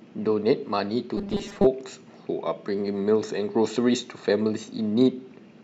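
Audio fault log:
1.17 to 1.67 s, robotic sound from repeated short buffers: the speech turns into a stiff, metallic drone with a fixed 200 Hz buzz that only loosely tracks the syllables, then clears. This is likely playback starved of fresh audio, so the same tiny slice of about 5 ms is looped over and over while real samples are dropped. That loop rate sets the 200 Hz buzz, and about half the span is repeated material rather than new sound.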